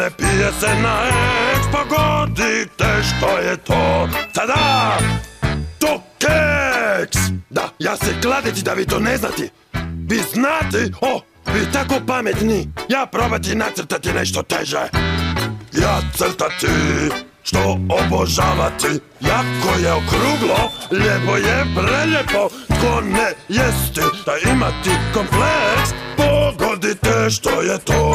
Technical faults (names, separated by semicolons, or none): none